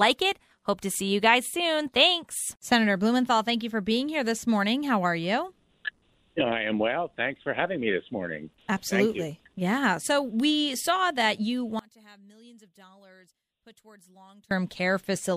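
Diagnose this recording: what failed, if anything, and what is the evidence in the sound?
From 11.79 s to 14.51 s the sound drops by about 28 dB, leaving only a faint residue. This matches one channel inverted, likely a polarity reversal in the analogue wiring: summed to mono, the content common to both channels cancels, and only their difference remains.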